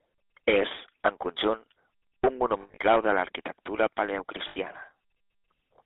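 GSM full-rate codec damage runs throughout. The codec models the vocal tract and drives it with a sparse, regularly spaced pulse excitation, which fits 13 kbps GSM full rate. That gives the speech a plainly audible buzzy, gravelly roughness, confined to a 300 Hz to 3.6 kHz band.

Lost GSM frames appear from 2.62 to 2.78 s, with 120 ms of audio missing across 160 ms. The longest gap is about 70 ms. A second loss of 80 ms follows at 4.48 to 4.58 s. Each missing stretch is filled by repeating the last good frame's settings, so the sound hangs as a rough, metallic ring before the signal resumes.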